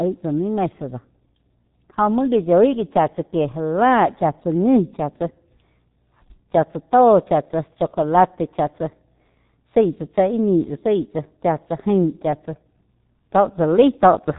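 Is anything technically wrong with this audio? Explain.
Yes. The whole clip carries heavy G.723.1 codec damage. This low-rate telephony coder encodes speech in 30 ms frames from a compact vocal-tract model that updates only slowly, and the coarseness here is consistent with a bitrate of around 6 kbit/s. Nothing survives above 3.8 kHz, so the speech sounds muffled and boxy. The sparse excitation and sluggish model updates make the voice hoarse and smear consonants together.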